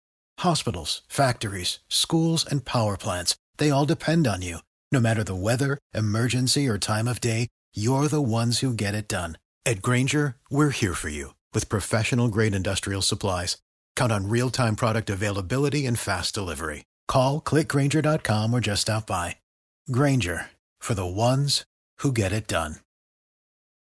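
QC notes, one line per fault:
No faults found in this speech clip. There is nothing to log for any point in the audio.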